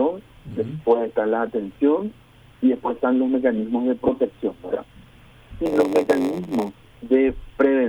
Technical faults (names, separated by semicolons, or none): lost LE Audio frames; block size mismatch (padded)